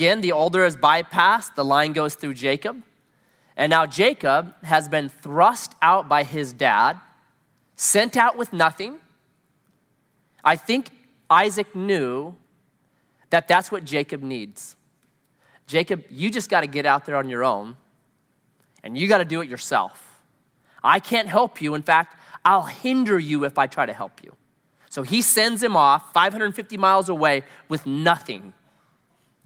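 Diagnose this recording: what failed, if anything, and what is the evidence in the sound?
Listening across the whole speech recording, nothing stood out that would point to a failure at any stage of the chain.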